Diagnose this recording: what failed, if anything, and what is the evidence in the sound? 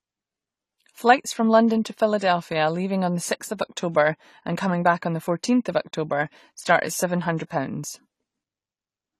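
The problem is at the codec stage and runs the whole length of the speech. There's nothing above 14 kHz, the top end sounds dull and smeared, and sibilants have a fizzy, warbly texture. That's the signature of AAC compression, likely AAC-LC squeezed hard, which fits a bitrate around 32 kbps. With that few bits per frame, the encoder lowers its cut-off and leaves holes or substitute noise in the upper bands, and you can plainly hear it.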